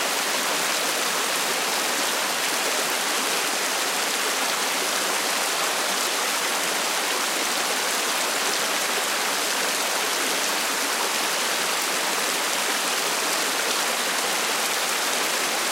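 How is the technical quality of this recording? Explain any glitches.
No technical faults can be heard in the recording. The sounds come through without any glitches to explain.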